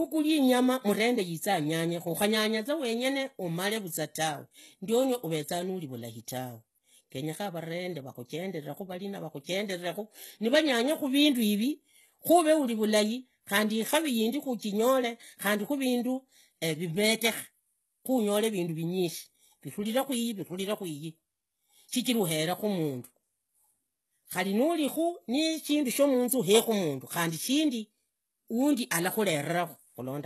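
All the way through, the speech has the sound of likely HE-AAC compression at a very low rate, fitting something around 16 kbps. The top end is rebuilt rather than kept, so s sounds come out gritty and metallic, and nothing survives above 12.3 kHz.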